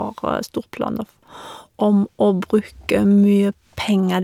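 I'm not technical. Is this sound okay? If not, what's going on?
Yes, this recording sounds fine; nothing is wrong here.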